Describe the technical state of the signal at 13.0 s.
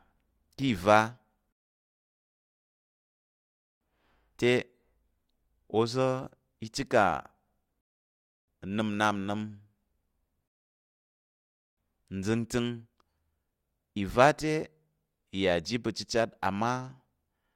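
At 13.0 s the speech signal is intact, with no dropout, clipping, glitch or other technical fault audible at that point.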